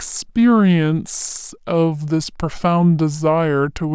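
The speech is low and slow throughout, 5.5 semitones down at 0.73 speed. This is a wrong sample rate, fitting 22 kHz audio played at 16 kHz.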